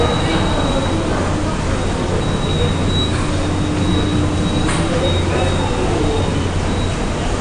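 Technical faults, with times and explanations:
Throughout: AAC compression. Nothing sounds above 9.8 kHz, and the audio is dull and smeared, plainly damaged by the codec. This fits a low-bitrate AAC-LC encode, likely around 32 kbps, that discarded the top band. A spectrogram shows a flat ceiling at 9.8 kHz.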